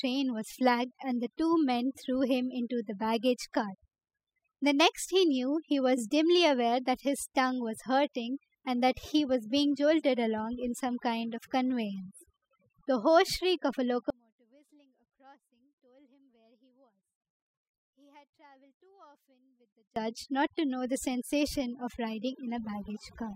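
Overdone noise removal runs throughout the speech. The noise reducer pushes individual frequency bands down or out wherever they sit near its noise estimate, taking quieter parts of the voice with them. The background drops and breaks up into twinkling specks.

An audio dropout to a faint residue follows from 14.10 s to 19.96 s, lasting about 5.9 s. The speech cuts off abruptly, leaving only a faint trace around 35 dB below its normal level. The likely cause is a lost signal while the path downstream stayed live.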